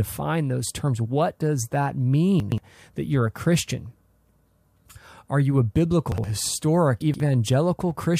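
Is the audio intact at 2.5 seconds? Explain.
No, chunks out of order from 2.4 to 2.58 s, between "does that" and "that you're a". One 60 ms chunk of speech plays two chunks late, so nothing is lost but the sequence is scrambled, leaving three hard joins heard as a brief jumbled garble.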